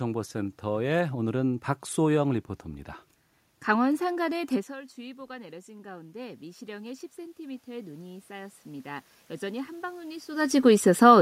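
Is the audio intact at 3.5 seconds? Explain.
Yes, the audio is intact at 3.50 s, with nothing there beyond the background noise of the room itself.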